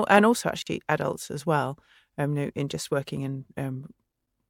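At 0.62 s the speech drops into an abrupt 44 ms silence, then resumes where it stopped: a gap at a join of encoded pieces, whose encoder padding was never trimmed.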